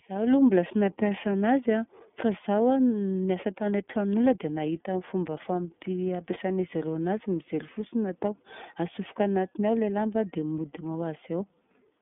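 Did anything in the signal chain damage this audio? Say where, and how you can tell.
Yes, at the codec stage. The whole clip carries iLBC codec damage, and it is plainly audible. Nothing survives above 3.8 kHz, and the usable band runs from about 150 Hz to 3.6 kHz. The speech sounds rough and slightly synthetic from start to end. The roughness fits 30 ms frames coded at about 13.3 kbps. Each frame's excitation is coded on its own, so small discontinuities give the grainy texture.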